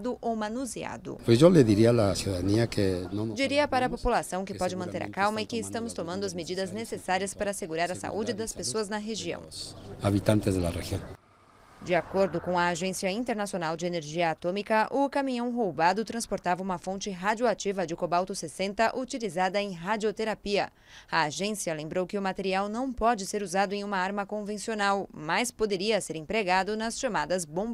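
Around 9.87 s there's a call bitrate drop lasting until about 16.55 s. The sound goes rough and muffled, which fits the encoder being squeezed from something like 96 kbps down near 19 kbps, with treble trimmed away. It bottoms out for roughly 4.1 s before recovering.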